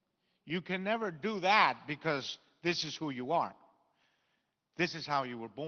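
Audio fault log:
No faults logged; the speech passes through a WebRTC call path whose codec rolls off the top end at about 6 kHz.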